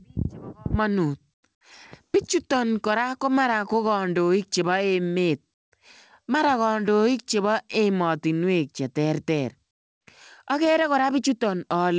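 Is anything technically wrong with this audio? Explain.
Yes. From 9.71 to 10.07 s, the background drops by about 16 dB and becomes a steady, featureless noise for 360 ms, likely comfort noise in place of the background: the sender's discontinuous transmission paused during this gap and the receiver substituted synthetic noise for the real background.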